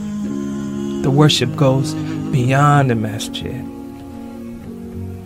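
Nothing in this clip calls for comment: no dropouts, glitches, clicks or distortion turn up anywhere along its run, so there's no fault to place in time.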